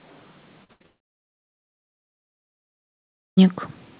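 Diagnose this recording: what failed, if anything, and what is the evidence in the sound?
Two brief smeared, fading holds break the speech at 0.64–0.71 s and 0.73–0.82 s. This is burst of packet loss at the network stage. Runs of packets arrived too late or not at all, and the receiver stretched the last sound for about 50 and 70 ms, so roughly 40 and 80 ms of speech are gone.

Right after, from 0.82 to 0.86 s, there is a quick wobble where the audio blends back in. This is short concealed packet loss. About 20 ms never reached the decoder, and it was bridged by continuing the preceding sound before the real signal returned.

From 0.86 s the audio falls to silence and stays there until 3.39 s, about 2.5 s, before speech resumes further on with that stretch missing. The cause is likely a long network dropout, with no packets arriving and concealment giving way to silence. The G.711 call path's 4 kHz band limit is audible throughout.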